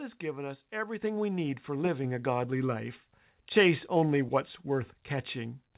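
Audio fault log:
1.02 s and 2.04 s, microphone volume stepped up: The level jumps suddenly twice, by about 7 dB after "has given us" and by about 4 dB after "we need for". The voice and the background noise rise together, and each new level stays. That points to the call software raising the microphone's input volume in one step, not to the talker getting louder. The audio stops at 4 kHz throughout, which fits a narrowband telephone codec.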